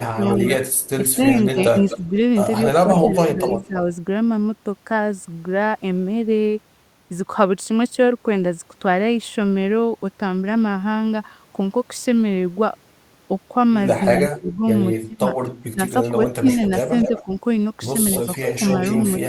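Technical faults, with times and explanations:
0.0–3.77 s, speech suppressed in double talk: the speech dips by about 15 dB in pieces totalling roughly 1.5 s, likely an echo canceller turning down both its own talker and the loudspeaker echo while they overlapped.
0.25–3.67 s, echo leak: a faint copy of the speech trails about 241 ms behind, roughly 15 dB lower, likely loudspeaker echo that the loudspeaker side's canceller failed to remove.
14.16–19.22 s, echo leak: the delayed copy returns about 246 ms late and stronger, roughly 10 dB below the speech, likely uncancelled loudspeaker pickup sent back down the line.
14.38–17.29 s, speech suppressed in double talk: the speech drops out in fragments, dipping by about 20 dB for under a second in total, likely suppression triggered by overlapping talk.
18.25–18.61 s, speech suppressed in double talk: a brief ducking of about 10 dB lasting only around 70 ms, likely the canceller again mistaking overlap for echo.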